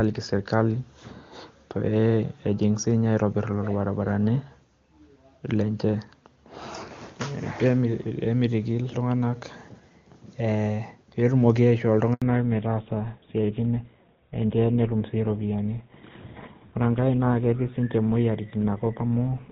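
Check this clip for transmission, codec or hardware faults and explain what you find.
Two faults, both around 12.1 s: a brief dropout during a network handover, followed by a permanent loss of wideband audio.

Handover gap, 12.14 to 12.22 s: the call switches networks and no speech frames arrive for about 80 ms. The sound cuts out quickly and stays silent until the new link delivers audio. Whatever falls in that window is lost.

Fallback to narrowband, from 12.22 s to the end: the call leaves AMR wideband (HD Voice), whose early portion is clean, and drops to a narrowband codec, likely GSM full rate. Nothing above 4 kHz survives, so the audio becomes duller and rougher, lacking its earlier crispness.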